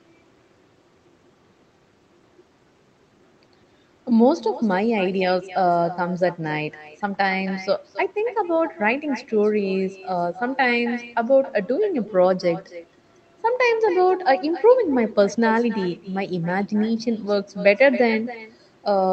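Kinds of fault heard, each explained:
Echo with no canceller: The far end plays the call through a loudspeaker, its microphone picks it up, and nothing removes it, so the speech returns after the network round trip. Each phrase is shadowed roughly a third of a second later by a thinner copy about 15 dB quieter. On a spectrogram every syllable has a faint twin shifted right. On a waveform each burst has a low trailing ghost that partly fills the gaps between phrases.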